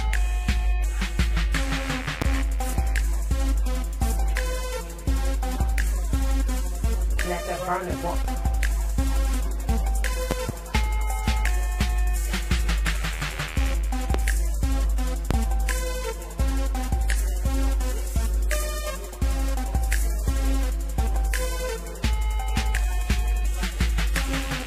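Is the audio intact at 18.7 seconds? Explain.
Yes, at 18.7 seconds the audio plays through cleanly, with no dropout, click, distortion or other fault audible at that point.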